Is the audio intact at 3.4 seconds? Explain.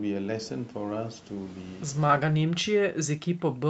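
No. From 2.2 s to the end, the speech is pushed down, by around 40 dB at its deepest, likely speech suppressed in double talk: an echo canceller mistook the talker for loudspeaker echo and attenuated both. Unlike packet loss, this is gain ducking rather than abrupt clicks.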